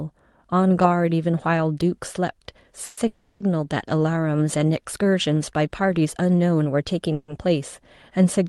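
Call audio freezes at 2.85–2.99, 3.07–3.42 and 7.13–7.30 s stretch the last sound into a fading buzz, likely from late packets draining the jitter buffer, appearing as smeared horizontal bands before speech resumes intact.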